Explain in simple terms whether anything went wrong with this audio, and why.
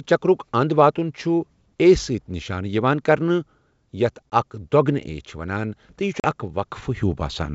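Packet loss on an ADPCM call is what went wrong. Twice, a small chunk of the call never arrived and was filled with silence. This call codes each sample as a change from what the decoder predicts, so after a gap the receiving end's guesswork no longer matches the sender's. You hear a sharp-edged dropout at about 4.30 to 4.35 s, roughly one packet's worth. A second, about two packets, comes at 6.20 to 6.25 s, right after "یہِ چھُ". Each hole is followed by slightly distorted sound before it settles, over the wideband G.722 line.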